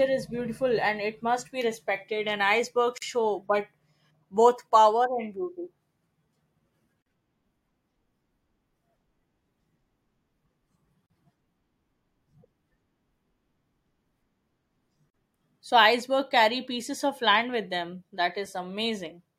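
Speech with a gap at a join of encoded pieces every 4 s, at 2.98, 7.02, 11.06 and 15.10 s: roughly 40 ms silences where untrimmed encoder delay and padding remain.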